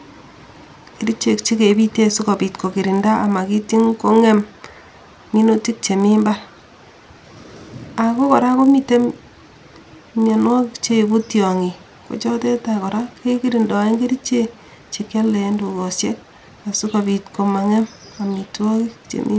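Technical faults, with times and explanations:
Throughout, resampler restarted on every block: the speech carries a steady 50 Hz buzz that rides along only while someone is talking and drops away in the pauses. The converter handled each 20 ms block on its own, so at every block edge it was missing the real neighbouring samples and left a tiny error. With edges that close together, the ticks merge into a rough buzz. The dulled top end fits a conversion from 48 kHz down to 16 kHz.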